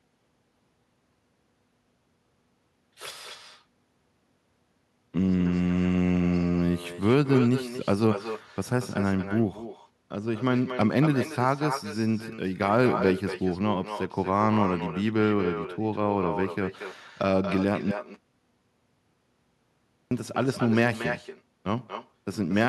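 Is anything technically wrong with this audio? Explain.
Yes, there are two faults. Throughout the speech there is echo with no canceller: the far end's loudspeaker output is picked up by its microphone and returned uncancelled. Every phrase is trailed roughly a fifth of a second later by a thinner copy about 9 dB below the original.

From 17.91 s to 20.11 s there is an audio dropout to silence. About 2.2 s of speech is lost, and the gap is silent with no room tone. This likely comes from the input briefly disconnecting or muting while recording continued, writing silence.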